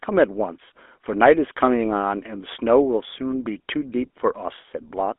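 Speech carries GSM full-rate codec damage from start to finish. Band sits near 250 Hz to 3.5 kHz. Pulse-driven vocal-tract coding adds plain buzzy, gravelly roughness, fitting a 13 kbps link.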